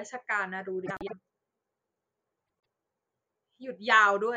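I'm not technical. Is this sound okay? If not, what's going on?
No. The speech has frames out of order twice, from 0.86 to 1.13 s and from 2.44 to 2.60 s. In each spot, two short chunks of sound, about a tenth of a second each in the first spot and about 0.08 s each in the second, play in swapped order. You hear a brief garbled flutter. Unlike a dropout, nothing goes missing and no time is lost. The sound is all there, just shuffled.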